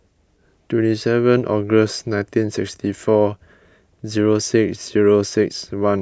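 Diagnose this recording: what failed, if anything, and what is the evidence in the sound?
Nothing stood out on listening to this speech recording that would point to a failure at any stage of the chain.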